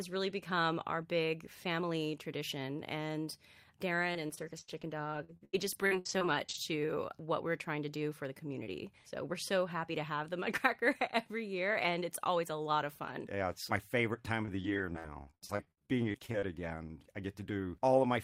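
Repeated packet loss (robotic sound) runs from 4.13 to 6.56 s, ending just before "to what we're trying", and again from 14.42 to 16.68 s after "it's my favorite time". Packets kept dropping, and each hole, up to 81 ms and 59 ms long, was patched by stretching the last sound, giving choppy speech with pieces missing.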